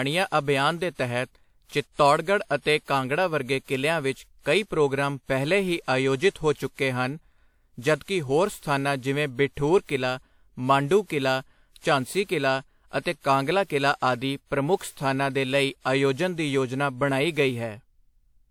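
Across the whole speech clip there's a swirly, hollow smear with soft attacks and nothing above 19.4 kHz, likely generation loss from around five passes through a WMA codec near 96 kbit/s.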